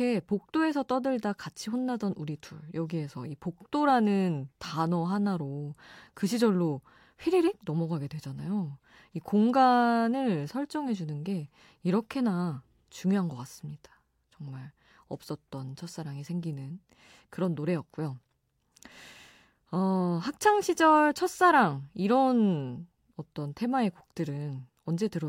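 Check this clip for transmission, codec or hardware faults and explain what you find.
Nothing stood out on listening to this recording; I heard no problems worth reporting.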